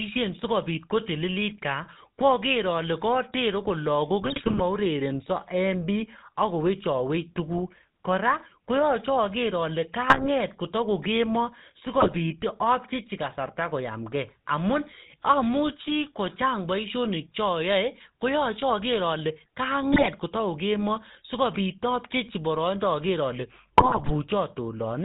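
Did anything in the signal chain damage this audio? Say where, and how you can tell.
Yes. The codec stage runs through the whole clip. The GSM full-rate codec shows as a buzzy, gravelly roughness in the speech, and the spectrogram has a hard ceiling at 4 kHz with coarse, smeared harmonics. The sound fits 13 kbps GSM coding, which models the vocal tract and drives it with sparse, regularly spaced pulses.

At the network stage there are GSM bit errors from 4.22 to 4.61 s, 10.10 to 10.28 s, 12.00 to 12.18 s, 19.93 to 20.09 s and 23.78 to 24.11 s. Each one is heard as squawks, pops and gargling. Corrupted filter, pitch or gain values distort the spectrum or inflate the level frame by frame. On a spectrogram these appear as blotchy patches, and the waveform shows short level spikes.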